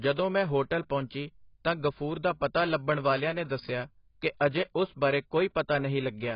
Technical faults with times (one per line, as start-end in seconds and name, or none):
0.00-6.35 AAC compression